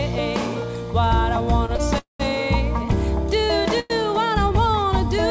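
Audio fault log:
1.66–1.71 s and 1.77–1.81 s: short stall from a late packet, twice. A packet arrived late and the jitter buffer ran dry, so the receiver held the last sound for about 26 ms and then 20 ms with a slight buzz or dip, then resumed from the same point with nothing lost.
1.99–2.22 s: call audio freeze. The sound stretches into a fading buzz or hiss, then drops to about 150 ms of silence before resuming where it stopped, adding 210 ms of delay. This is likely packets delayed in transit that emptied the jitter buffer.
3.80–3.92 s: call audio freeze. A shorter hold of about 103 ms fades but never reaches silence, then the sound continues from the same place. The likely cause is again a delivery hold-up draining the jitter buffer. Over the call path, nothing is heard above 8 kHz, which fits G.722.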